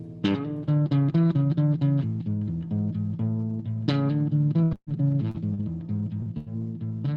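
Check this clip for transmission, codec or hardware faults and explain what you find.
Yes, there are transmission faults: three bursts of packet loss and three short concealed packet losses, all in the music's second half. The high end stops near 12 kHz, which fits a low-bitrate Opus call path.

Bursts of packet loss occur at 4.63–4.74 s, 4.75–4.90 s and 6.38–6.49 s. The receiver stretches and fades the last sound. The music then jumps ahead, with 80 to 120 ms missing. The second burst falls silent for about 50 ms.

Short concealed packet losses occur at 5.31–5.37 s, 5.54–5.61 s and 6.22–6.29 s. About 40 ms never arrives each time. The gap is filled from the preceding sound and blended back, leaving a brief smear or wobble.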